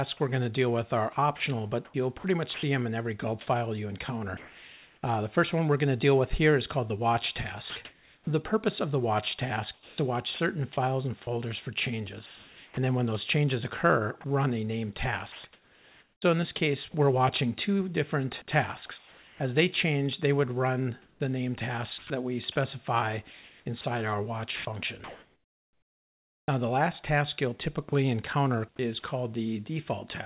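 The sound comes through a call path with nothing above 4 kHz, which fits a narrowband telephone codec. Sound chopped by the voice detector occurs at 0.17–2.63, 7.7–8.27, 9.74–12.77, 14.21–16.94, 21.02–26.48 and 27.89–29.03 s. Short stretches keep vanishing into comfort noise, about 2.25 s in total in the 21.02–26.48 s stretch and only 60 ms near the end. The likely cause is a sender's detector switching on and off. Sound dropped by the voice detector occurs at 4.37–5.03 s and 18.98–19.4 s. The sound gives way to steady noise for 660 ms and 420 ms, then returns. The detector has likely judged quiet sound to be background and stopped sending.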